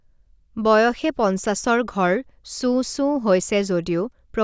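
No technical faults can be heard anywhere in the speech recording, and the signal holds steady throughout.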